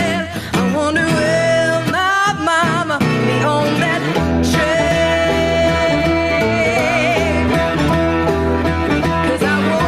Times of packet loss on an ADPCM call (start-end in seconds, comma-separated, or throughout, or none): none